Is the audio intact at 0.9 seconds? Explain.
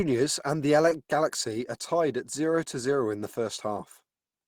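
No. From 0.89 to 0.93 s there is a short concealed packet loss: about 20 ms of the speech never arrived at the decoder in time, and the receiver patched roughly 15 ms of that gap by extending the preceding sound, pitch-based where it was voiced and as shaped noise where it was not, before crossfading back into the genuine signal. The result is a brief smear or wobble, and a short consonant there can drop out.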